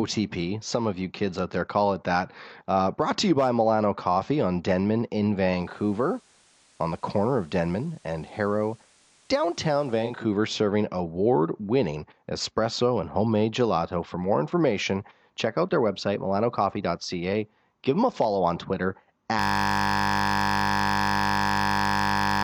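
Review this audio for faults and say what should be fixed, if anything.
The receiver lost its digital signal and fell back to the FM broadcast in a digital radio blending to analogue event from 5.51 to 10.31 s. Each crossover takes about 360 ms. On the analogue leg, the level drops about 1 dB, and soft hiss sits well under the speech. Better reception or antenna placement would keep the digital stream locked and avoid the fallback.

At 19.39 s the computer or driver froze while the audio hardware kept replaying the same 20 ms ring buffer. This system hang loop repeats that slice at 50 Hz, so the speech turns into a steady buzz that lasts to the end. Fixing the driver or system stall, or adding a watchdog that mutes output when buffers stop refreshing, would prevent it.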